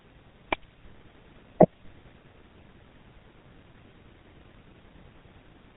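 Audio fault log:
throughout: GSM full-rate codec. The speech passes through a vocal-tract model excited by regularly spaced pulses that keep only every third sample, at a rate that fits 13 kbps, with nothing passed above 4 kHz. The codec damage is plainly audible as a buzzy, gravelly roughness and a muffled top end.
1.73 s: GSM bit errors. Flipped bits reached the speech decoder and corrupted its filter, pitch or gain values for what sounds like a single frame, which fits an error rate around 2%. The result is a brief squawk or pop, with the spectrum bent for an instant.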